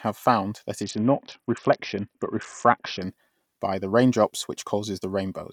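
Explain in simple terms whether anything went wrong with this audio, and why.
Something did go wrong, from about 0.83 to 3.02 s, between "found that" and "by the raindrops": a Bluetooth SBC bit pool drop. The link likely got congested, so the phone squeezed the audio hard, and the speech turns dull and gritty until it recovers.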